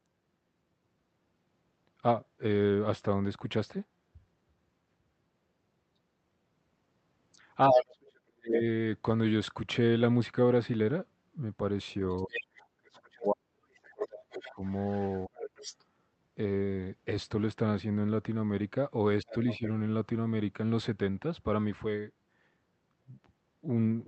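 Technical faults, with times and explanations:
7.72–8.54 s, 12.26–15.33 s and 19.23–19.63 s, speech suppressed in double talk: the talker's speech dips while the far side is also talking. The drops go as deep as about 40 dB in the first two stretches and about 15 dB in the brief third one. The likely cause is the echo canceller failing to tell the talker from the loudspeaker echo and attenuating both together.
7.73–8.57 s, 12.17–15.84 s and 19.28–19.68 s, other side's voice leaking through: a second voice comes through alongside the talker's speech. It is briefly about 5 dB louder than the talker in the first stretch, about 10 dB below in the long middle stretch, and about 15 dB below near 19.3 s. This is likely residual loudspeaker echo that the canceller did not remove from the microphone signal.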